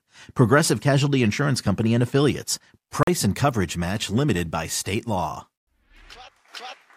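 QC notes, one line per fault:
3.03–3.08 s, Bluetooth dropout: the speech cuts to silence for about 43.5 ms, then resumes further along as though it had kept playing underneath, so a sliver of sound is missing rather than delayed. The likely cause is packets arriving too late at the headphones and being discarded, a gap that fits roughly three lost packets. On the waveform it shows as a flat hole; the spectrogram shows a clean vertical blank band across all frequencies.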